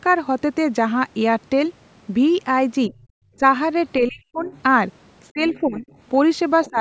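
Between 2.88 and 3.43 s the speech dips briefly, for about a tenth of a second in total, falling by roughly 20 dB. This is speech suppressed in double talk. Both ends were likely talking at once, and the echo canceller turned the near talker down along with the echo it was fighting. From 3.99 to 4.52 s it happens again, much harder. The voice drops by about 40 dB for about 0.4 s and nearly vanishes in pieces. Overlapping that dip, from 4.37 to 4.62 s, a faint second voice leaks through, about 30 dB below the speech. This is the other side's voice leaking through. The canceller likely left some of the loudspeaker signal in the microphone path. From 5.32 to 5.86 s the speech is pulled down again, by about 15 dB over roughly 0.4 s. Overlapping it, from 5.44 to 5.96 s, the far voice is clearer, about 20 dB under the speech. At 6.65 s a short scrap of the far voice breaks through at a similar level. 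From 6.7 s to the end, the speech dips by about 15 dB once more.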